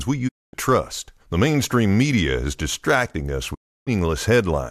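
At 0.27 s the speech fades out over about 20 ms and stays silent until 0.55 s. This is a digital broadcast dropout: the receiver lost good frames and muted. It happens again after "distracting us", from 3.53 to 3.89 s. That content is gone.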